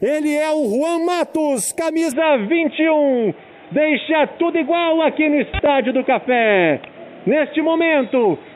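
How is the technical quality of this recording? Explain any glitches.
The recording has one clear fault. From 2.12 s to the end, the sound abruptly turns dull and boxy, with nothing above 3.8 kHz, a level shift of a few dB and a new background hiss. This is likely an input switched to a poorer device, with no gap at the changeover.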